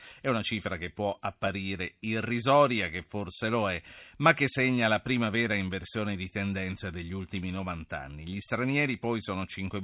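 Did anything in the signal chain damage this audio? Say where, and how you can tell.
No, no signal-chain damage.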